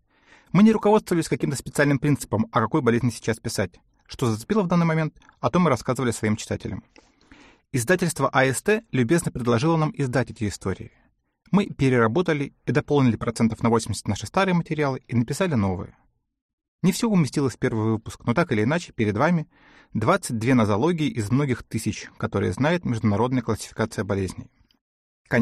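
Nothing here stands out as a technical fault; the audio just runs along without any glitch worth pointing to.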